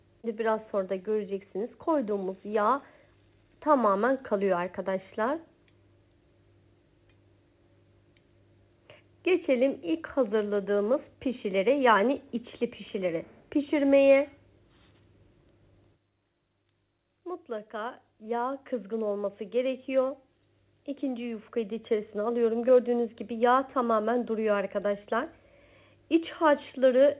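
No technical faults can be heard in this clip. The sound has come over a call connection, and nothing reaches above 4 kHz, a band limit that fits G.711 mu-law coding at 64 kbps.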